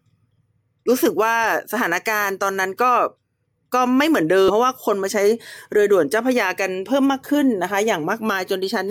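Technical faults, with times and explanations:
4.48–4.50 s, damaged data in a compressed stream: a brief blip lasting about 20 ms interrupts the speech. Part of the encoded data at this point was corrupt. The decoder either misread those bytes as valid frame contents or discarded them, lost frame alignment, and had to scan forward for the next recognisable frame header before normal decoding resumed. The garbled or missing frame data replaces the intended speech for that moment.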